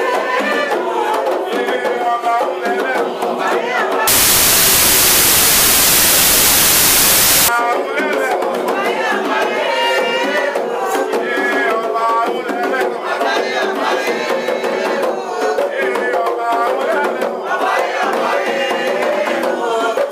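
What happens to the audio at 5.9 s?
At 5.9 s you're inside a stretch of wrong sample width, running from about 4.08 to 7.48 s. Data written as 32-bit integers are being read as packed 24-bit, so most samples mix mismatched bytes. You get loud noise with the original buried underneath, playing at 0.75 speed and lower in pitch.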